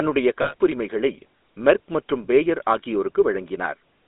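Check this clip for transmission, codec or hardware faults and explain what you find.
Two faults are present in this speech clip. The GSM full-rate codec runs throughout, and a short burst of lost GSM frames appears early on.

GSM full-rate codec, throughout: a vocal-tract model driven by sparse, regularly spaced pulses, with a line band of 250 Hz to 3.7 kHz. The plainly audible result is a buzzy, gravelly roughness, which fits the 13 kbps full-rate coder.

Lost GSM frames, 0.42 to 0.54 s: for 120 ms, which fits about six lost 20 ms frames, the decoder repeats the last good frame's settings. The sound holds as a rough, metallic ring.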